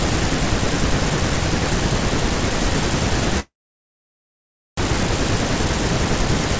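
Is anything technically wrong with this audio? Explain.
Yes. From 3.40 to 4.79 s the speech halts: a brief fading tail of the last sound, then about 1.3 s of silence before speech resumes with nothing skipped. This is a call audio freeze, likely from delayed packets draining the jitter buffer, which inserted a 1.4 s gap. The band stops at 8 kHz, which fits a G.722 call path.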